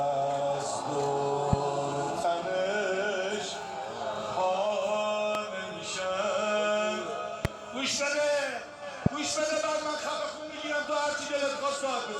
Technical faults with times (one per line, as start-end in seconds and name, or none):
1.53-1.55 loud pop
5.35-5.38 loud pop
7.45-7.47 loud pop
9.06-9.09 loud pop